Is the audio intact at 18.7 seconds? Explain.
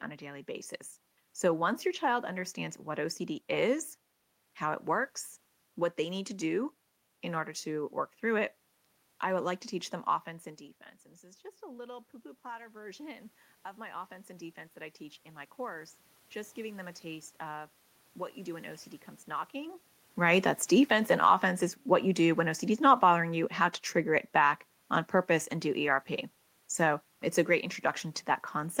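No. At 18.7 seconds the clip is in the middle of an automatic gain rising fault that runs from 11.2 to 19.88 s. After the input fell by about 17 dB, the gain control slowly raised its gain by about 11 dB, so the voice and the room noise swell up together. When a talker moves closer, the voice gets louder but the room noise stays the same level.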